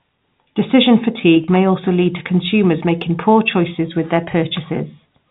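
At 1.44 s the speech breaks up briefly, a packet loss with pitch repetition lasting about 40 ms until 1.48 s. That gap fits two lost packets. The receiver fills it by repeating the last pitch period of the voice. Because the gap is short, the sound holds on one slightly buzzy, static pitch instead of dropping out. Normal speech resumes with "may also lead to". The G.711 telephone coding keeps everything under 4 kHz.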